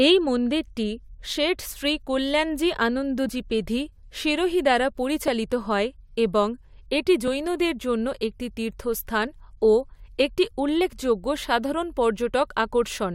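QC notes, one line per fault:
3.29 s and 5.28 s, overlap between stream segments: two tiny skips about 2 s apart, the first losing about 6 ms of speech and the second about 13 ms. Where adjacent segments' time stamps overlap, the player trims the supposed duplicate, but that audio was never actually repeated. A few milliseconds of real signal disappear and the waveform jumps abruptly. The 2 s spacing points to 2-second stream segments.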